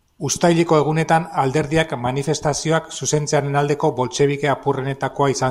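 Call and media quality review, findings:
Nothing stood out on listening to this speech recording.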